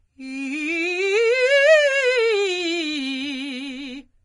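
Transcoding between lossy codecs is the likely cause: the music seems to have passed through a low-rate HE-AAC stage and then Vorbis at a lower rate. Throughout, nothing survives above 10.5 kHz, and two distinct sets of compression artefacts sound layered together.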